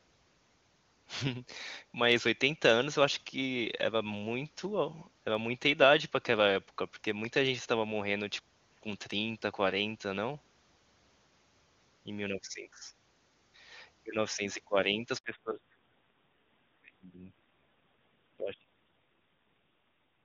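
At about 15.18 s there's a handover gap. The call got passed between networks and no speech frames made it through the switch, so the voice drops out for 60 ms, until 15.24 s, and whatever was said then is lost.

Right after, at 15.24 s, comes a fallback to narrowband that lasts to the end. Up to then the HD Voice sounded clean. From here nothing above 4 kHz remains, and the voice turns dull and raspy, which points to a low-rate narrowband mode around 5.9 kbit/s.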